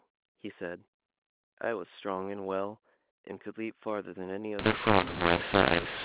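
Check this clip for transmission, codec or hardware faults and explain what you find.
One fault, near the end of the clip. Mu-law and A-law mixed up, from 4.59 s to the end: mu-law telephone coding is decoded as A-law, scrambling sample levels so the speech turns harsh and distorted and pauses fill with noise. Before that point the G.711 telephone coding sounds as expected, with nothing above 4 kHz.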